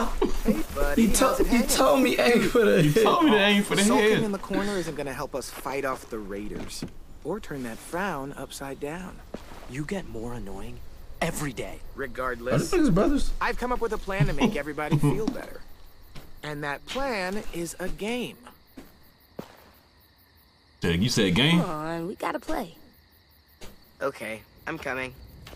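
No technical faults are audible anywhere in the recording.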